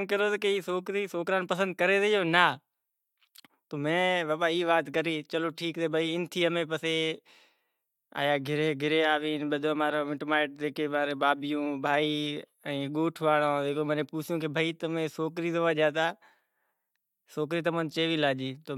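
No technical faults can be heard anywhere in the speech recording, with the signal path holding steady throughout.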